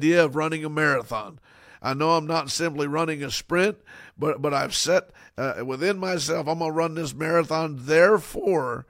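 Speech recording with no audible technical faults.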